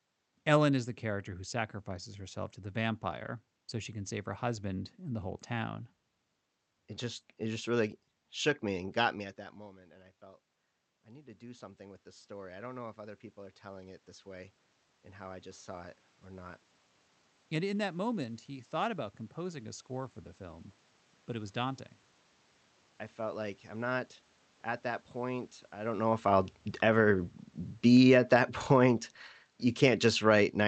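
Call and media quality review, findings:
Automatic gain rising, 9.17–16.57 s, after "shook me and got". Talker moves off-mic near 9 s, input drops about 19 dB; AGC climbs about 11 dB over seven seconds. Room noise swells with voice, so it's gain, not the talker returning.

Automatic gain falling, 26.18 s to end, after "point I don't know". Talker movement near 26 s; AGC lowers gain gradually. Background sinks together with voice, pointing to gain control rather than the talker backing away.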